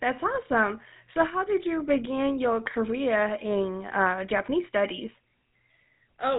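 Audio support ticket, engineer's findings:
Buzzy, gravelly roughness on the speech throughout, plainly audible; nothing above 3.8 kHz. GSM full-rate codec in path: vocal-tract model driven by a regular pulse train from sparse excitation samples, consistent with a 13 kbps coder.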